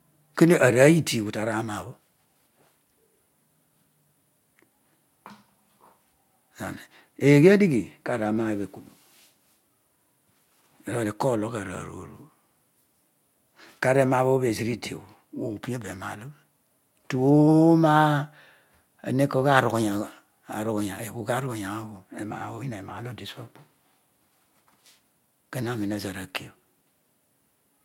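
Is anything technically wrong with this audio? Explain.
No, nothing here sounds technically wrong; it's a speech recording with no faults to point to.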